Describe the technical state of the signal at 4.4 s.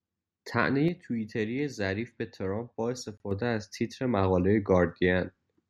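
At 4.4 s the speech signal is intact, with no audible fault at that moment.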